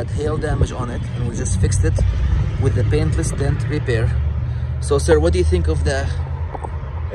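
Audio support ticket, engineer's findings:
No audible faults found; nothing to escalate.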